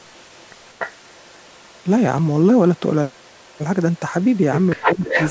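From 0.01 to 1.83 s a faint delayed copy of the speech trails about 293 ms behind, far below the main level. This is an echo leak, likely from a far-end loudspeaker whose echo canceller let part of the playback back into its microphone. It is a distinct repeat at a fixed lag, not a smooth reverberant tail. The same faint copy returns from 3.13 to 3.59 s and briefly from 3.95 to 3.99 s.

From 4.75 to 5.02 s the speech is pulled down hard, by a large margin, for about a fifth of a second in total. This is speech suppressed in double talk, likely because the canceller could not tell the talker from the returning echo and attenuated both.

The final echo leak runs from 4.84 to 5.31 s. The same 293 ms lagged copy is now roughly as loud as the speech itself.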